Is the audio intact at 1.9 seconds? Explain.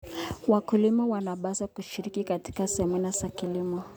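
Yes, at 1.9 seconds the speech runs on intact, with no dropout, click, distortion or other fault to be heard at that moment.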